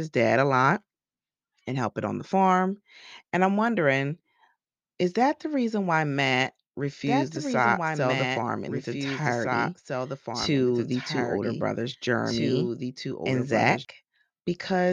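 From 7.07 to 13.85 s the speech is doubled: a dry copy about 5 dB quieter trails about two seconds behind, starting and stopping abruptly, likely a second capture path.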